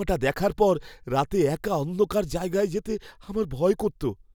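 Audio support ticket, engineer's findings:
No audible defects found on playback; no action required.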